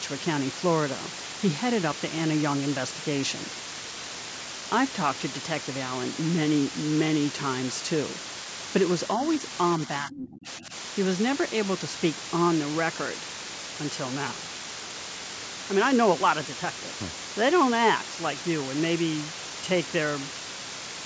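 Throughout the speech, the signal has been reduced to very low bit depth with dither added before rounding. The sound points to roughly 4 bits. Because the dither turns the rounding error into random noise rather than distortion, the result is a constant, even white hiss sitting only about 5 dB below the speech. It never pumps or crackles, and nothing reaches above 8 kHz, as expected from call microphone processing.

From 9.78 to 10.73 s, speech is suppressed in double talk. This is likely because the echo canceller could not tell the talker apart from loudspeaker echo while both sides spoke, so it turned both down. The voice is turned down, at its deepest by around 30 dB, and the losses add up to about 0.7 s within that stretch.

Inside that same stretch, from 10.12 to 10.27 s, the other side's voice is leaking through. The echo canceller has likely not fully removed the far talker's loudspeaker playback from the microphone. 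A brief scrap of a second voice surfaces, roughly 15 dB below the main speech, for about 0.15 s.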